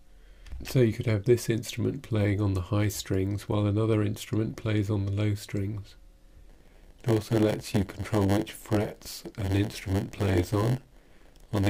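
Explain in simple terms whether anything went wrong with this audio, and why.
A block size mismatch (padded) starts at 6.49 s and lasts to the end. From that point, one stage in the audio chain hands over chunks of sound that are a little shorter than the next stage expects, and the missing bit of each chunk is filled with silence. Those tiny gaps repeat 100 times a second, which you hear as a buzz, and the added silence stretches the audio so it runs at about 0.92 times its proper speed.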